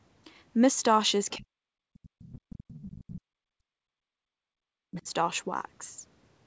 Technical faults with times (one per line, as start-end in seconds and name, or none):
1.31-1.37 other side's voice leaking through
1.37-5.07 speech suppressed in double talk
2.19-2.32 other side's voice leaking through
2.70-2.82 other side's voice leaking through